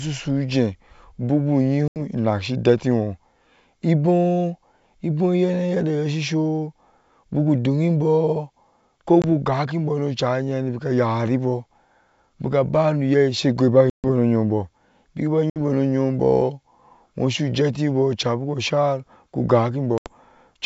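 Packet loss on an ADPCM call drops audio at 1.88–1.99 s (after "ujiie buku", about 80 ms, roughly four 20 ms packets), 9.22–9.25 s (20 ms), 13.90–14.06 s (after "bikaba noyai she goiba", 140 ms), 15.50–15.59 s (60 ms) and 19.98–20.13 s (80 ms). Each gap is filled with silence, and the decoder's predictor and step size drift from the sender's. The speech therefore stops in a hard-edged hole, then returns with brief, slight distortion until the decoder settles some tens of milliseconds later.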